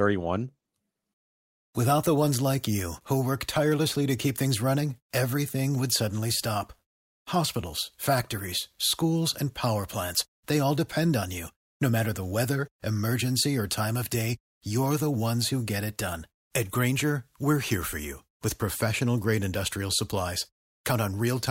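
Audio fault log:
No faults are heard anywhere in this speech recording. Nothing in it calls for an entry in the log.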